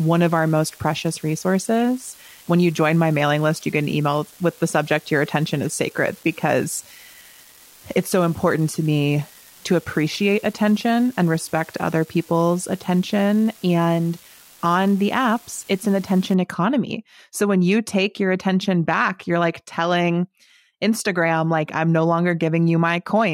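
A steady crackle and fizz runs under the speech from 0.0 s to 16.34 s, continuing through the pauses. This is an unreliable data bit: one marginal line flips its bit at random, each error adding an identical spike of about -32 dBFS.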